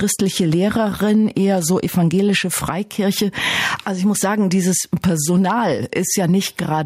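Gain pumping runs through the whole clip: the level ducks under each loud sound, a swing of around 10 dB. The likely cause is input gain set far too high, with a fast limiter or compressor clamping down on each peak, so loud and soft passages sit squashed close together.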